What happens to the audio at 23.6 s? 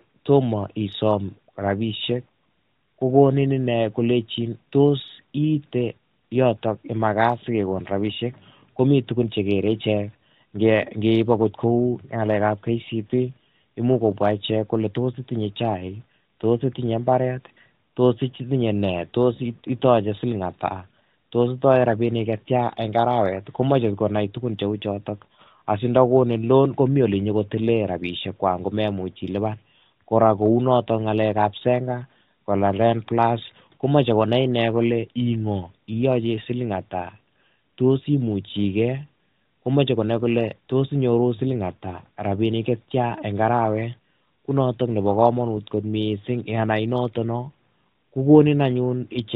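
Nothing goes wrong at 23.6 s. The speech passes through intact, with only the steady 4 kHz ceiling of the AMR narrowband mobile codec it was carried through.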